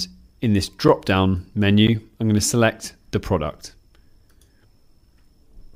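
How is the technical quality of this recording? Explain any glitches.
Two brief dropouts mar the recording. At 0.88 s and 1.87 s, the output buffer likely went unfilled in time, leaving a block of digital silence about 8 ms and 11 ms long. The second fits a 512-sample buffer. Each is too short to be heard as silence and comes across as a tick or dip.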